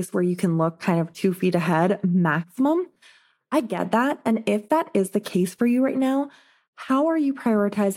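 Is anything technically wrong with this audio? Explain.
Yes. From 3.60 to 3.80 s the speech drops by about 6 dB and then returns, most likely a case of one channel dropping out. With one side of the stereo pair lost, the mono sum keeps only half the shared signal, so the level halves rather than vanishing. Unlike a full dropout to silence or a gradual gain ride, the speech stays present at a steady lower level, with clean, abrupt edges at both ends.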